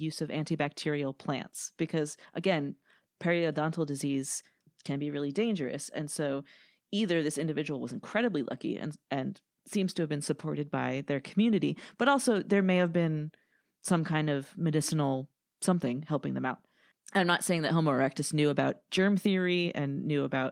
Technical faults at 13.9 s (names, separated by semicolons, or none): none